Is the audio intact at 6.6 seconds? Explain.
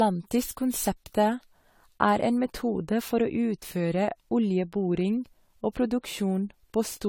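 No. At 6.6 seconds, as throughout the clip, the speech sounds swirly, smeared and hollow, with blurred attacks and nothing above 19.9 kHz. This is generation loss, likely from repeated AAC-LC encoding, around five passes at a quality that fits roughly 64 kbit/s. Each decode and re-encode quantises again on a shifted frame grid, so noise and spectral holes build up beyond what a single encode would leave.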